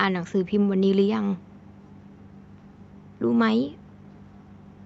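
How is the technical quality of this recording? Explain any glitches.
The speech comes through with no audible faults, with faint room noise about 53 dB below it and a call-codec character whose upper limit near 8 kHz fits an Opus call path at a moderate bitrate.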